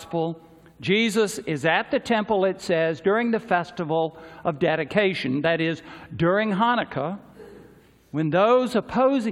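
Nothing in this audio stood out as a technical problem on listening.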